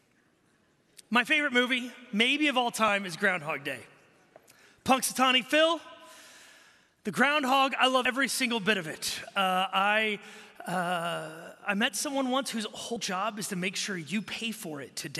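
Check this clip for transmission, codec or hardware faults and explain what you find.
One codec fault turns up three times. At 2.88, 8.05 and 12.96 s you get compressed frames skipped: whole frames never get decoded, so the audio jumps ahead about 30, 70 and 100 ms. That's roughly one, three and four frames, consistent with a frame of about 26 ms. Each one is heard as a sudden jump forward in the audio.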